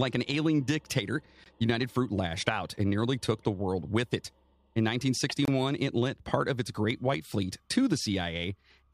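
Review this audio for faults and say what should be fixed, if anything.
Gaps between stream segments appear at 1.44 s and from 5.45 to 5.48 s: hard-edged silences of about 17 ms and 26 ms where segment timestamps fail to meet and the player inserts silence. Nothing is lost; time is added. Align segment timestamps so each segment begins exactly where the previous one ends.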